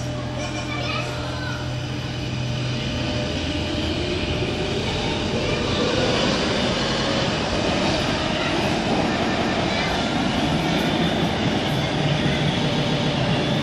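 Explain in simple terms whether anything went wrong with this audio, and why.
Repeated frames at 0.51, 6.83, 9.20 and 12.68 s. The same short piece of compressed sound, between 0.09 and 0.19 s long, was stored or sent again, so the player repeats it one to three times. It sounds like a stutter, and makes the audio about 1.1 s longer.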